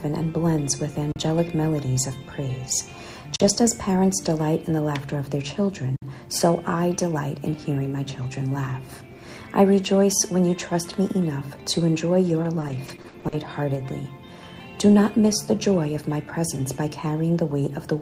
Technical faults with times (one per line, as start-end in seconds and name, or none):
1.12-1.16 underrun with held sample
3.36-3.40 underrun with held sample
5.96-6.02 underrun with held sample
12.43-13.34 repeated packet loss (robotic sound)